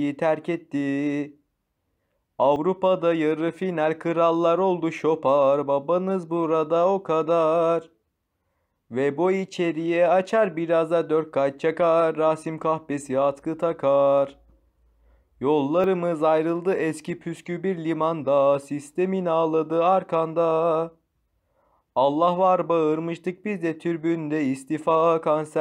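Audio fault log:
2.56 s and 15.84 s, dropped buffer (overrun): an abrupt skip forward and no gap of silence, losing about 40 ms at the first point and about 20 ms at the second. This is likely from samples overwritten before being read, so the surrounding audio is spliced directly together.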